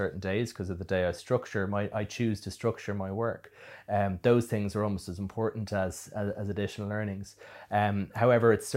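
No technical faults can be heard anywhere in the speech recording, which stays steady and intact throughout.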